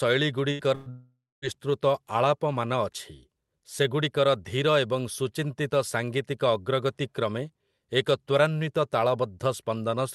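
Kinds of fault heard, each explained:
Burst of packet loss: at 0.51 s and 0.75 s, about 80 ms and 120 ms of speech vanish, bridged by the last sound stretched into a fading buzz or hiss.
Long network dropout: from 0.90 to 1.45 s, roughly half a second is missing, likely from a dropout; the held sound fades, leaving about 250 ms of silence.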